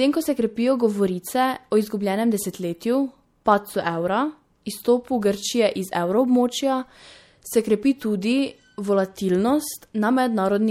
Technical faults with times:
0.00-10.70 MP3 compression

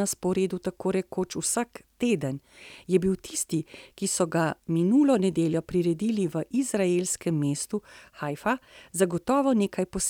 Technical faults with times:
none

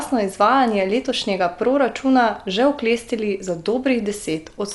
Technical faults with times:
0.00-4.75 Dolby Digital compression

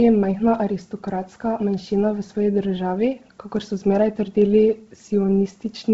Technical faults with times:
0.00-5.93 Bluetooth LC3 compression

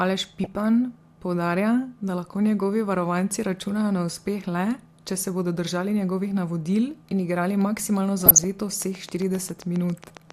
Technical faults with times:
0.44-0.57 DAB burbling
8.19-8.44 DAB burbling
8.82-10.31 train of clicks

